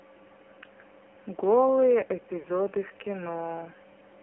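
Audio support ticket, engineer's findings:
AMR narrowband mobile codec, whole clip: heavily buzzy, synthetic speech confined to 250 Hz to 3.4 kHz, consistent with a low AMR-NB mode near 6 kbps. Spectrogram shows a hard ceiling with nothing above 4 kHz and smeared, coarse harmonics.

Lost AMR speech frames, 2.40 to 2.47 s: brief warbled dip as the decoder repeats the last good parameters with falling gain. The 40 ms gap fits two dropped 20 ms frames. Waveform shows an amplitude sag, and the spectrogram a stretched, blurred patch.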